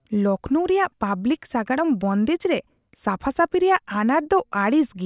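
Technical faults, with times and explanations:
No technical faults are present: the speech signal stays intact and continuous, with no breaks, level disturbances or added artefacts at any point.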